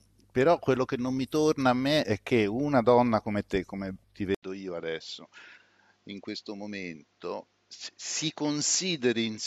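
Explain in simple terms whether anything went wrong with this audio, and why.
At 4.35 s the sound cuts out for about 80 ms, then returns duller, a little quieter, and with a faint new background noise that stays to the end. From that point nothing above 7.6 kHz comes through, so the crisp upper detail is gone. This is most likely an input switched to a poorer device: the recording system changed to a different, lower-quality microphone mid-recording, which has a narrower range, its own tone and its own noise.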